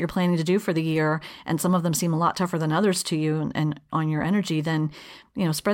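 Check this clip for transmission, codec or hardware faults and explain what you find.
I found no faults to explain in this clip.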